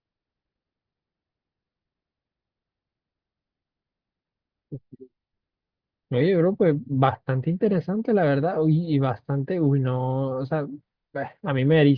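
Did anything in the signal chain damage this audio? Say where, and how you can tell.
No, nothing in the chain seems to have damaged this recording; it holds together the whole way with nothing in the signal that points to a stage going wrong.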